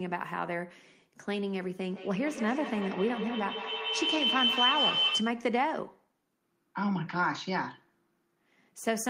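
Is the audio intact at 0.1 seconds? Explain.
Yes, at 0.1 seconds the speech plays through intact, with no dropout, click or other fault audible at that moment.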